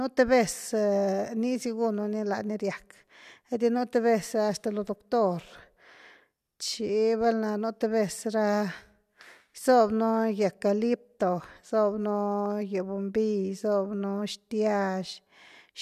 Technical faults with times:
none

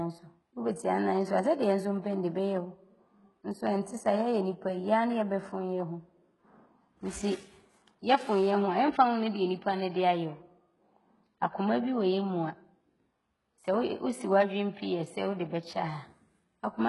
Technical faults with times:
0.00-16.89 HE-AAC compression

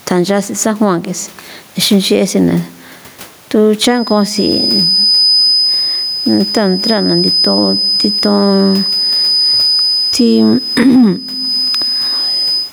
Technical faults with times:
0.00-12.73 gain pumping
3.83-12.73 feedback whistle

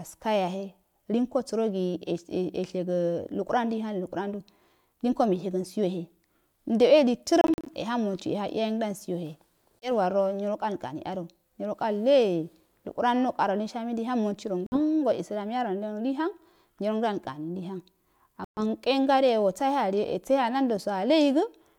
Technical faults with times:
7.41-7.67 Bluetooth dropout
9.79-9.89 Bluetooth dropout
14.66-14.78 Bluetooth dropout
18.44-18.59 Bluetooth dropout

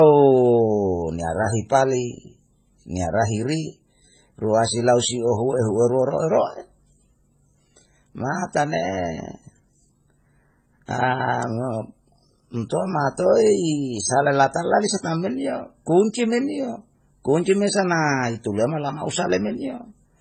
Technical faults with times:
0.00-20.20 transcoding between lossy codecs

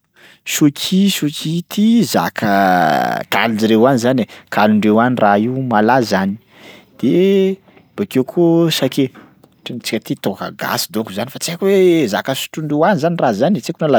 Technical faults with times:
none

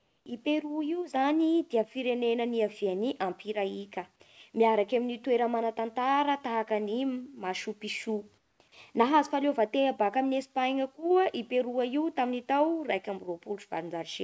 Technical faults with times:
0.00-0.26 comfort noise in place of the background
8.38-8.60 comfort noise in place of the background

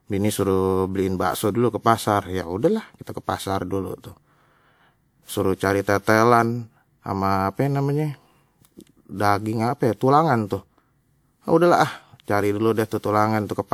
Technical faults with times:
0.00-13.73 generation loss

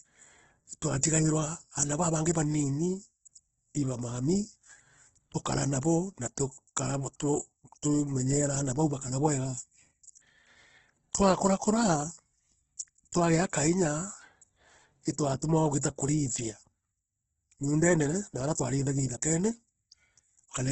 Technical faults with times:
0.00-20.71 Opus compression
2.33 pre-echo
15.81 pre-echo

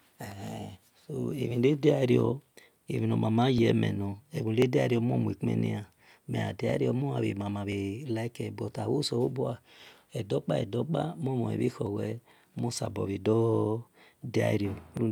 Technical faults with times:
0.48-14.97 clock drift buffer slips

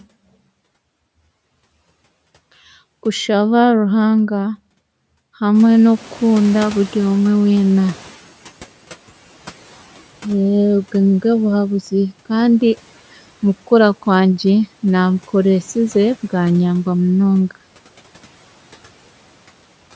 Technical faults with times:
5.54-8.23 noise suppressor catching up

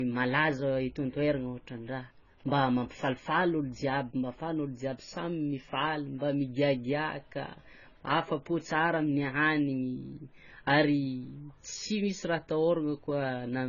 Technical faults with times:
0.00-13.68 low-bitrate audio saved at a high bitrate

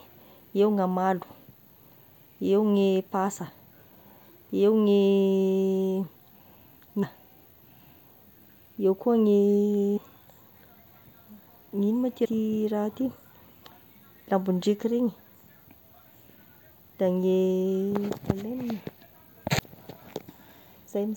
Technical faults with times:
7.02 damaged data in a compressed stream
9.96 damaged data in a compressed stream
12.24 damaged data in a compressed stream
19.63 damaged data in a compressed stream

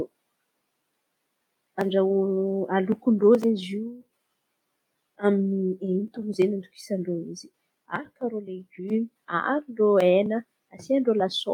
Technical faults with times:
none

